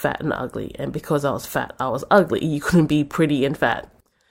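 Nothing in this bit of speech trips any alarms; there's no fault to point to anywhere along the way.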